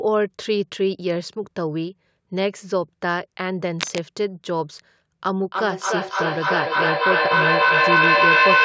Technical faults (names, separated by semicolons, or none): cable scratch noise; feedback echo between two devices